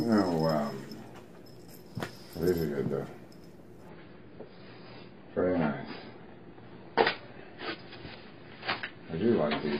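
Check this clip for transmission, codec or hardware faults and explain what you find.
One fault is present: an adaptive stream at a lower bitrate, from 3.89 s to the end of the clip. At that point the quality switches abruptly, without any gap, as the player drops to a much leaner encoding of the same stream after the connection slowed. Above 5.1 kHz nothing remains, so the top end sounds dull, and coding artefacts become audible. The step down fits a move from roughly 96 kbit/s AAC to about 16 kbit/s.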